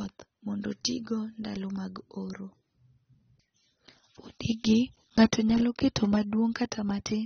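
From start to finish the speech carries plainly audible AAC compression, likely from an AAC-LC encode at a low bitrate, around 27 kbps. Nothing survives above 6.4 kHz, so sibilants lose their edge and the whole clip sounds dull and smeared, with a warbling, fizzy texture. On a spectrogram the energy stops at a hard ceiling near 6.4 kHz.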